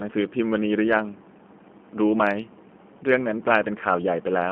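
Throughout, speech sounds thin, rough and synthetic within 200 Hz to 3.4 kHz: the G.729 codec rebuilds it from a filter and sparse pulses.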